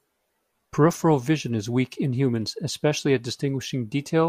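No technical faults can be heard in the speech.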